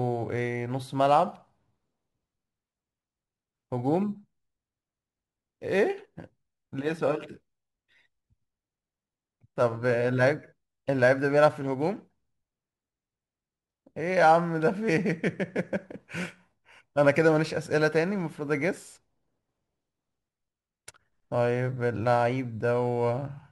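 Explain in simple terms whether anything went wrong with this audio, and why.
Something did go wrong: a crude rate conversion runs through the whole clip. The speech has a faint gritty fizz riding along with it, quieter than the talking, and it gets stronger on loud and bright sounds. It fits audio switched from 48 kHz to 44.1 kHz by simply dropping or repeating samples instead of filtering properly, which leaves a repeating error that makes shifted, off-key copies of the speech.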